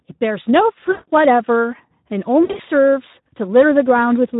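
The whole clip carries Speex codec damage, plainly audible: hoarse, grainy speech, because the excitation is starved of bits, which fits a low setting around 11 kbps. From 0.91 to 1.11 s there's VoIP packet loss concealed by the speech codec. About 160 ms went missing, so the decoder stretched its last pitch and filter out while fading them, and the voice stays smeared just after. Around 2.43 to 2.61 s the same thing happens in shorter bursts, roughly 120 ms lost across 160 ms with the longest gap 60 ms.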